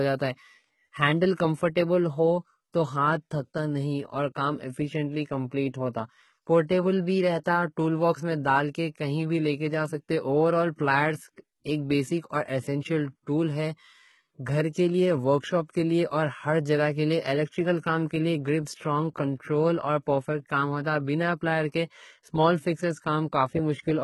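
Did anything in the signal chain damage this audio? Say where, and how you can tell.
Yes, at the codec stage: the speech likely passed through HE-AAC compression at a very low rate, fitting roughly 16 kbps. Throughout, the treble is rebuilt from copied lower bands, so s sounds turn gritty and metallic, and nothing exists above 11.8 kHz.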